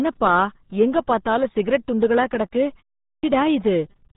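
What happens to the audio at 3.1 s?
At 3.1 s the speech suffers a clipped start after a pause. After about 0.31 s of silence, the output path has gone idle and needs time to wake and relock. The first 184 ms, from 3.05 to 3.23 s, is swallowed, so the speech bursts in abruptly with its opening sounds missing.

That moment also carries the RealAudio 14.4 codec heard throughout. The 8 kbit/s dial-up speech coder discards everything above 3.8 kHz and damages the signal heavily, leaving the returning speech muffled, band-limited and gargly.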